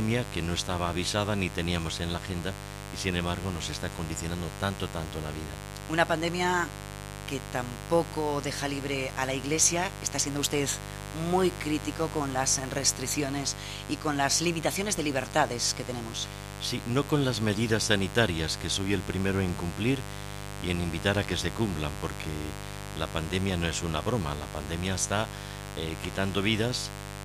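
A mains buzz runs through the whole clip. Sharp switching spikes leak in twice per 50 Hz cycle, likely through a dimmer, rectifier or missing shield. Their harmonics reach several kHz. The result is a steady, raspy buzz, only around ten decibels below the sound.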